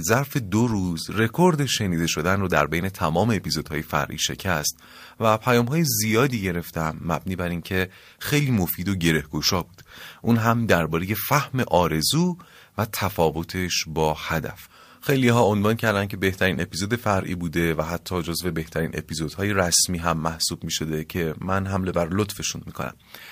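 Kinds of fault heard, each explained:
No technical faults are audible anywhere in the speech recording.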